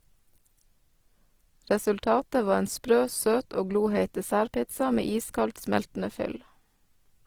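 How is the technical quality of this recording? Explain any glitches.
The quality is compromised by plainly audible codec damage that runs through the whole recording.

From start to finish there's Opus compression at work, likely from a very low bitrate, somewhere around 16 kbps. The bandwidth is still fullband, so it's not muffled. The encoder, in its music mode, keeps each band's energy but can't afford the detail, so it patches bands with folded copies or noise. You hear the speech come out rough and grainy rather than swirly.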